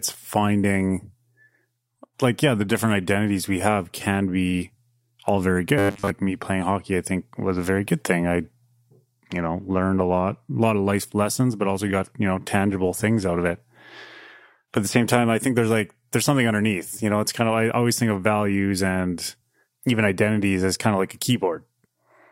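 From 5.78 to 6.10 s the speech collapses into robotic sound from repeated short buffers: a rigid, metallic buzz fixed at 100 Hz, still tracing the words' shape. The cause is likely starved input, with a 10 ms chunk looped through most of that stretch. Unlike plain dropouts, the gap is filled with a steady pitch rather than silence.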